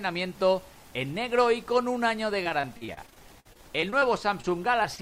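A stretch of repeated packet loss runs from 2.43 to 4.04 s. More than a dozen holes arrive in quick succession, the longest about 51 ms, and roughly a fifth of that span is rebuilt by extending the preceding sound, so the audio turns choppy and robotic. On a spectrogram this shows as repeated short blocks of smeared, overly regular harmonics or flat noise, with abrupt seams where real audio resumes. The waveform looks like a string of copied segments. Three instances of short concealed packet loss follow, at about 4.42 s, 4.83 s and 4.96 s, each losing roughly 20 ms. The receiver bridges each gap by continuing the last sound and then blending back, which is heard as a brief smear or wobble, and the first one also stretches timing slightly. Each appears as a narrow vertical band of blurred spectral detail.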